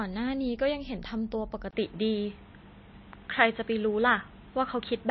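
From the start the speech sounds watery and swirly, with treble gone above 5.8 kHz and smeared consonant attacks, likely MP3 compression at a bitrate near 26 kbps. Unlike a plain low-pass filter, the band-limited sound also warbles as weak frequency lines drop in and out.

At 1.71 s a 20 ms gap is followed by duller, boxier sound cut off above 4.2 kHz, a level shift of a few decibels, and a faint new noise floor. This is likely the input switched to a poorer device, not a codec change, because tone, level and background noise all change together at once.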